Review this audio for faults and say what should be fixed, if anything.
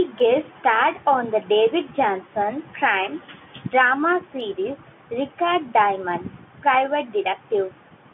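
No faults are audible here; nothing needs fixing.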